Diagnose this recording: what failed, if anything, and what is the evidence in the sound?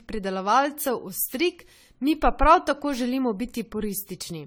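The speech sounds swirly, smeared and hollow throughout, with blurred onsets and nothing above 19.8 kHz. This is codec generation loss, likely from about seven successive AAC-LC passes at what sounds like 64 kbit/s, each requantising on a shifted frame grid so noise and spectral holes accumulate.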